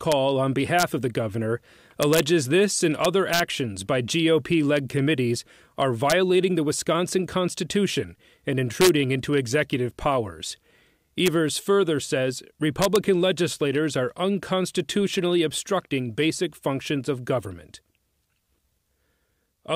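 Integer overflow: peaks overshooting the integer limit by up to about 1 dB wrap to the opposite sign instead of clipping, so loud moments of speech crack violently at 0.12, 0.79–0.83, 2.03–2.20 (after "of the governor"), 3.05–3.40, 6.10–6.13, 8.81–8.89, 11.26 and 12.82–12.96 s.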